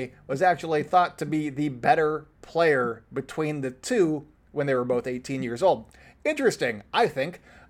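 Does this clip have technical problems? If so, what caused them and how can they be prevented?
No, the speech signal shows no technical problems anywhere in the recording, so there is nothing here that needs preventing.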